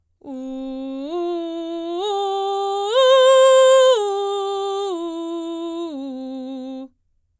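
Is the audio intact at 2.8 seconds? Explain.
Yes, the music plays through 2.8 seconds with no dropout, click, distortion or other fault at that point.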